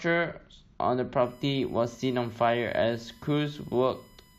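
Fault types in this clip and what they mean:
USB whine: current drawn by the USB bus in 1 ms frames leaks into the audio through power or ground, so a steady 1 kHz tone sits under the speech from about 1.23 s to the end, roughly 35 dB below the signal.
Overlap between stream segments: two stream segments, each about 2 s long, carried overlapping time stamps, and the player trimmed away sound that had never been doubled, so a few milliseconds vanish and the waveform jumps, heard as a tiny skip at 1.95 s.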